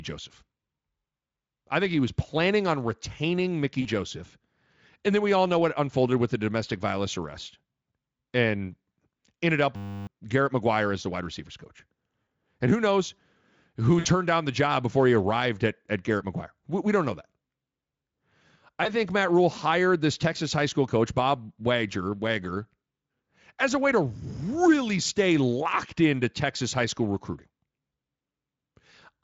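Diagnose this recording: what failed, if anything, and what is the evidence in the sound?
Network side first: there's VoIP packet loss concealed by the speech codec at 3.81–3.89 s, 12.23–12.27 s right after "the wide receivers coach", 13.99–14.06 s just before "down the job before", and 18.83–18.90 s. The decoder stretches its last pitch into a fading buzzy smear, covering gaps of 40, 40, 60 and 20 ms, which fits whole 20 ms frames going missing.

Then a system hang loop at the driver/buffer stage, 9.76–10.07 s, just after "ended up". The machine stalled while the hardware kept replaying one 10 ms slice, 31 times over, so you get a steady 100 Hz buzz in place of roughly 300 ms of real audio. The Speex coding underneath does only light damage.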